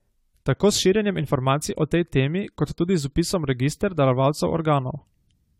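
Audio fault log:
throughout generation loss: the speech sounds swirly, hollow and smeared, with blurred attacks and nothing above 17.9 kHz. It is likely from around seven AAC-LC re-encodes near 96 kbit/s, each requantising on a shifted frame grid. That degradation exceeds what one encode at that bitrate would cause.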